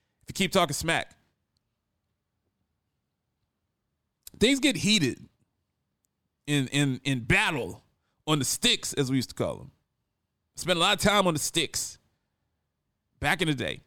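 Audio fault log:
Nothing to log here: the speech comes across without any audible technical faults at any point.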